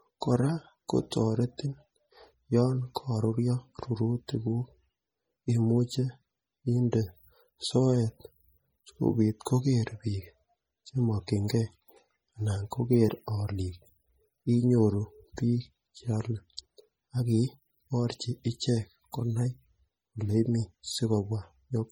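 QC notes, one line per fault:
throughout: MP3 compression, heavy damage, likely from a low bitrate around 32 kbps; weak detail swirls watery, sibilants chirp metallically, attacks smear.
20.29 s: dropped buffer (overrun), the speech jumping ahead, likely because roughly 10 ms of samples were overwritten before collection and spliced shut.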